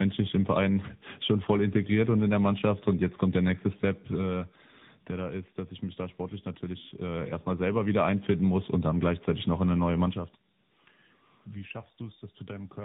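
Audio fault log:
throughout, tandem speech coding: the speech sounds like it went through a narrowband mobile codec twice, likely around 10 kbit/s AMR with a plain telephone hop between. The second encoder re-mangles the first one's output, so it comes out rougher and warblier, with nothing above 3.8 kHz.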